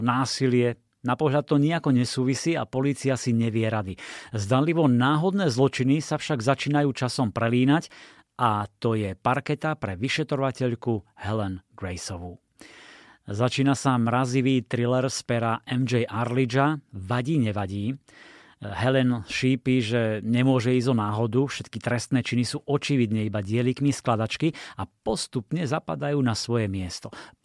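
No technical faults are audible.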